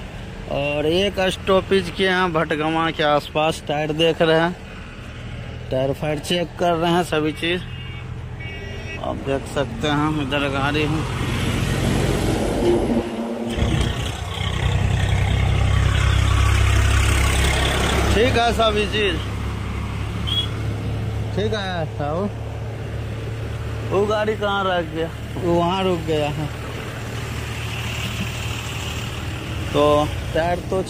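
No technical faults can be heard anywhere in the recording; the signal stays steady and continuous throughout.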